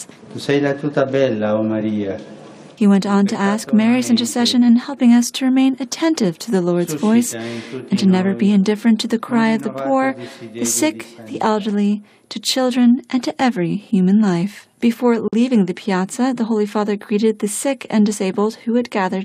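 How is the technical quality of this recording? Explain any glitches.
The recording has one clear glitch: a brief dropout where the audio goes silent and then picks up again.

From 15.28 to 15.33 s there is a gap at a join of encoded pieces, about 48 ms long, cutting into otherwise continuous sound. The audio was likely encoded in separate segments and spliced without trimming, so one segment's end padding and the next segment's start-up delay both remain as dead air. On a waveform it shows as a flat notch with steep, slightly softened edges. On a spectrogram it appears as a thin vertical blank stripe across all frequencies, after which the sound resumes exactly where it left off.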